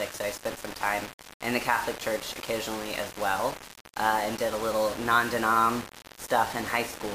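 Throughout, grainy distortion tracks the sound, likely low bit depth without dither, fitting 5-bit rounding. The waveform looks stair-stepped, the spectrogram broadly hazy.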